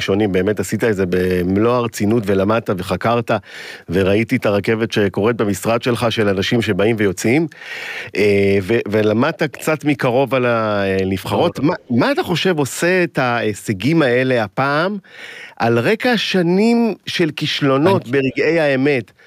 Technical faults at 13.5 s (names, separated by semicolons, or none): none